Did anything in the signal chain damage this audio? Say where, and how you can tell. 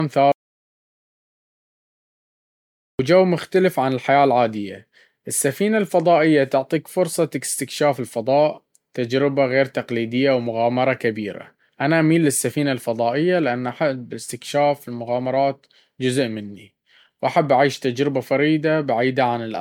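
Yes. The whole recording sounds swirly and hollow, with smeared consonant attacks and a watery shimmer that is worse than a single 128 kbit/s MP3 pass should leave. Nothing is present above about 19.9 kHz. This is generation loss at the codec stage, most likely from around seven successive MP3 decode and re-encode cycles. Each pass requantised the audio on a shifted frame grid, so the noise and spectral holes stacked up.

Between 0.32 s and 2.99 s the speech cuts out into silence with no room tone underneath, and about 2.67 s of material is simply missing before it resumes at "مختلف عن الحياة العادية". This is an audio dropout to silence at the input or capture stage. The likely cause is a lost input, such as a disconnected device, a failed link or a stray mute, while the recorder kept writing silence.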